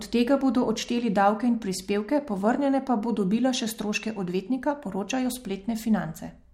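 Speech recording, no audible technical faults at any point.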